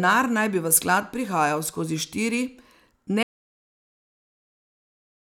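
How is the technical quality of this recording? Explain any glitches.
The recording has one clear glitch: an audio dropout to silence. At 3.23 s the speech cuts off mid-flow. From there to the end of the clip there is nothing at all. The room tone vanishes too, so the gap is dead silence rather than a quiet passage. The likely cause is a lost input, such as a disconnected device, a failed link or an accidental mute, while the recorder kept writing. Anything spoken after 3.23 s is gone.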